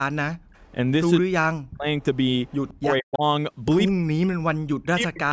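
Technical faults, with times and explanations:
0.0–0.45 s, 1.19–1.86 s, 2.8–3.23 s and 3.92–5.33 s, speech suppressed in double talk: the speech dips hard, up to about 40 dB down. The likely cause is the echo canceller clamping both its own talker and the loudspeaker echo while the far side talks over this one.
0.65–0.71 s, 2.01–2.74 s and 3.87–3.92 s, echo leak: a faint delayed copy of the speech trails by 166 ms. It's very quiet in the short scraps and loudest in the longer stretch around 2 s, likely loudspeaker pickup the canceller didn't fully remove.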